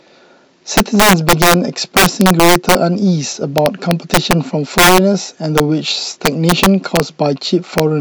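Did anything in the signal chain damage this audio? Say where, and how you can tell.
Yes, integer overflow at a fixed-point gain or sample-format conversion stage, at 0.77–1.54, 1.97–2.75, 3.58–4.33, 4.78–4.98, 5.58–5.60 and 6.26–7.00 s, and at 7.78 s. Peaks driven roughly 1 to 9 dB past full scale wrap to the opposite rail instead of limiting. They show as vertical sign-flip jumps on the waveform and broadband streaks on the spectrogram, and they crack far harder than clipping.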